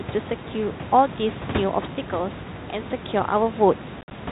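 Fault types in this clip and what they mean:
Packet loss on an ADPCM call, 4.01 to 4.12 s: about 70 ms of audio drops out in hard-edged silent gaps scattered across 100 ms, the longest lasting 50 ms, which fits the loss of something like seven short packets. Each missing stretch leaves the decoder's adaptive predictor and step size out of step with the sender's, so the sound comes back with brief distortion before it resettles.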